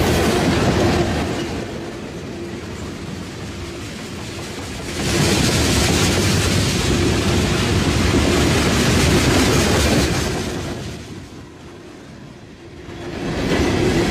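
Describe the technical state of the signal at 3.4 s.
At 3.4 s the signal is intact, with no fault audible at that point.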